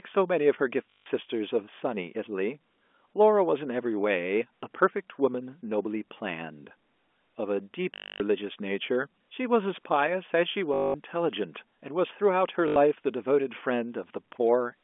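At 0.9–1.06 s, 7.94–8.2 s, 10.74–10.94 s and 12.68–12.76 s there is packet loss with last packet repeated. The receiver loops the last good fragment, giving a robotic 50 Hz buzz that fits 20 ms packets, rather than the silence of a plain dropout, over the band-limited G.711 telephone line.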